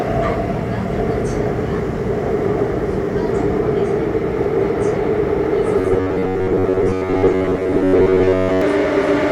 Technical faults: robotic sound from repeated short buffers

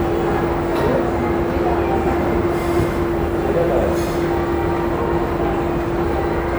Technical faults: none

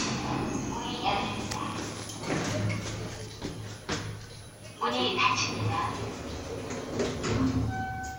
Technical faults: train of clicks

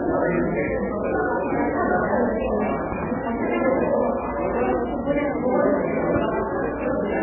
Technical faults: MP3 compression

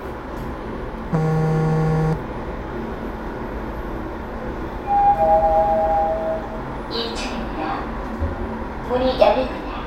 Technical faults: none

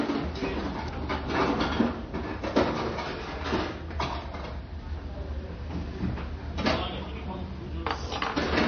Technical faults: MP3 compression

